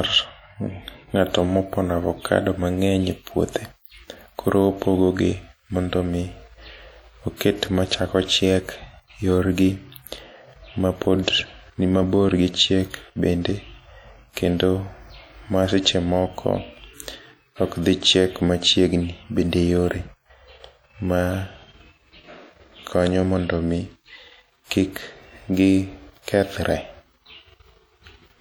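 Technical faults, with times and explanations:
Throughout, WMA compression: the speech has a ringing, washy quality, with a hiss that swells and fades along with the sound. This is likely a transform codec like early WMA working at a low bitrate, consistent with around 48 kbps. Long coding blocks smear quantisation noise over tens of milliseconds around each sound, and weak spectral components get dropped. Content still reaches about 20.1 kHz.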